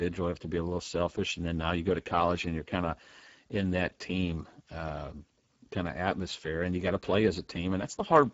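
From start to finish, the speech carries plainly audible Speex codec damage. Speex is a CELP coder that models the voice with a filter and an excitation signal. Here the excitation gets too few bits, which fits a bitrate near 10 kbps. Voices sound noisy and hoarse. Nothing is present above 7.7 kHz, so the top of the band is simply missing.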